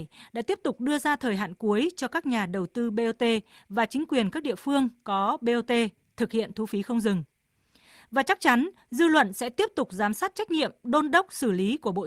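Nothing technically wrong turns up in this bit of speech; there's no fault to point to anywhere in it.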